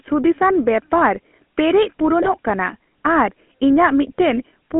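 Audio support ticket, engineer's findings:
GSM full-rate codec, whole clip: speech coded by pulse-excited vocal-tract model, sparse excitation, fits 13 kbps full rate. Sound buzzy and gravelly, band limited to roughly 200 Hz to 3.4 kHz, plainly audible damage.

GSM bit errors, 2.21 to 2.29 s, just after "ᱵᱮᱯᱟᱨ ᱯᱮᱨᱮᱡ": corrupted filter, pitch and gain parameters reaching the decoder, consistent with about 1% bit error rate over four 20 ms frames. Symptom: brief squawk and gargling burst, spectrum bent, level jumping.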